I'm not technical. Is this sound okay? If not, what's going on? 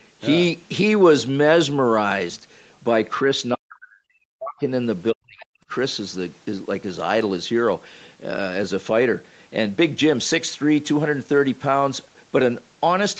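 No. The speech drops sharply, almost to silence, from 3.55 to 4.69 s and again from 5.12 to 5.71 s. This is speech suppressed in double talk, likely from an echo canceller that mistook this talker for the far end and turned it down.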